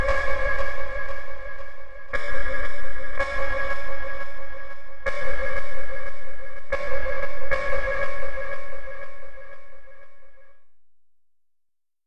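Listening closely, nothing in the recording stood out as a technical problem at any point.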